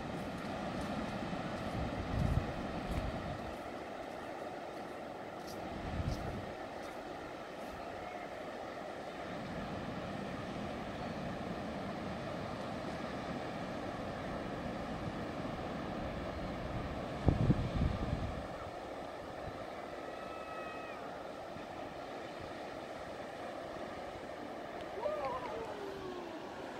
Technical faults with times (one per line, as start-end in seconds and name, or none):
6.88 corrupt frame decoded
19.25 corrupt frame decoded